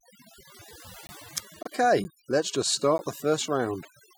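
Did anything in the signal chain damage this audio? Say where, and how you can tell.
Yes. Overdone noise removal runs throughout in the processing stage: the background drops and breaks up into twinkling specks, because quiet spectral bands are gated away.

Blocks of digital silence from the driver or buffer stage appear at 1.07–1.09 s, at 2.04 s just before "let's just", and at 2.98 s just after "let's just". Each cuts out and back in with no fade.

At 1.63–1.67 s, just before "let's just", the audio jumps ahead. This is likely a broken MP3 bit reservoir at the codec stage, with a frame length of 26 ms.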